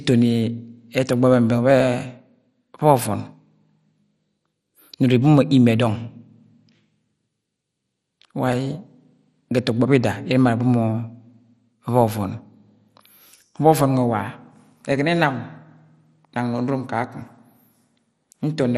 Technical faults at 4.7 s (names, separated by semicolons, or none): MP2 compression